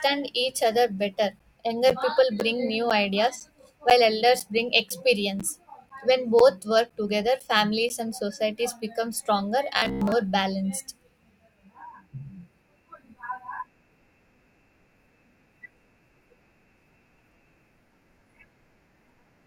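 Speech with two distinct faults. From 1.39 s to 7.9 s there are periodic USB or driver dropouts: every 0.5 s a gap of roughly 10 ms drops to silence, about fifteen in all, heard as evenly spaced ticks over the voice. A background task is stalling the USB bus or audio driver on a fixed schedule. From 9.78 s to 10.13 s the speech turns into a rigid, metallic buzz at 66.7 Hz, robotic sound from repeated short buffers. The likely cause is that audio arrived too seldom, so a chunk of about 15 ms was replayed in place of most of the real signal.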